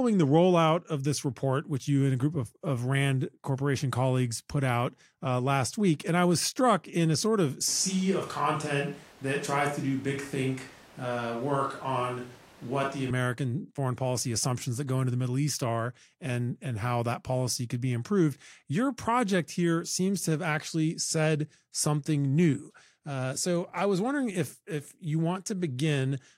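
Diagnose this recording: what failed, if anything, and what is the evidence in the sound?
Analogue input stage: from 7.68 to 13.10 s the speech abruptly turns roomy and thin at similar level, with room noise about 25 dB below it. This is likely a switch to a distant microphone. The lost bass and the added room noise point to a change of microphone rather than added reverb.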